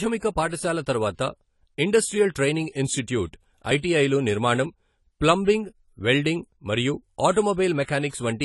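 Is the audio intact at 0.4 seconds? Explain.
No. At 0.4 s, as throughout the clip, the speech carries AAC compression damage, likely from AAC-LC at a low rate fitting about 32 kbps. The encoder's lowered cut-off removes everything above 11.4 kHz, leaving the sound plainly dull and audibly degraded.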